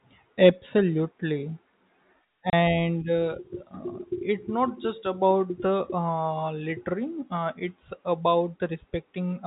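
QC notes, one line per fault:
2.50–2.53 s, packet loss filled with silence: the speech drops out abruptly for 30 ms, with hard edges, because the missing audio was replaced by digital silence instead of being concealed; the gap fits three 10 ms packets, beneath the band-limited G.711 telephone sound.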